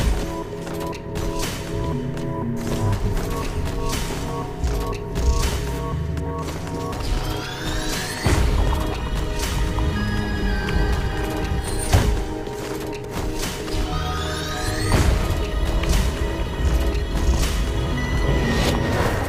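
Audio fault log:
Throughout, sample clock jitter. The converter's clock wanders by a few microseconds, so each sample lands slightly off time. Steep, fast-moving parts of the waveform suffer most. A faint hiss and roughness ride on the sound, about 30 dB below it, swelling on loud, bright passages and vanishing in silence.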